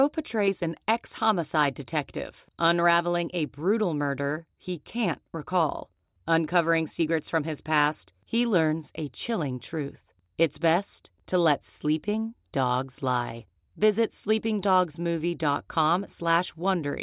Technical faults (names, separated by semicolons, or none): none